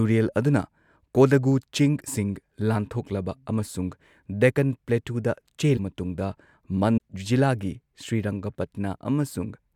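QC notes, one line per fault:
5.76–5.79 s and 6.96–6.98 s, broken MP3 bit reservoir: each is a brief garbled glitch of about 20 to 26 ms, roughly one 26 ms frame, where the speech skips forward. The likely cause is lost frames in the stream. The frame after each gap looks back into the reservoir for borrowed data, finds bytes from the wrong frame, and decodes them into a short corrupted burst before playback resumes.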